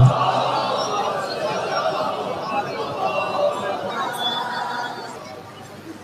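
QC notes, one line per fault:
3.90–5.16 s: section at the wrong speed. For about 1.3 s the audio runs at 1.25 times its proper rate, so everything in that stretch is hurried and pitched up by roughly four semitones, with timing and pitch shifted together rather than independently. The likely cause is the segment being resampled or played against a mismatched clock, so its samples are consumed too quickly. Normal rate and pitch return abruptly at 5.16 s.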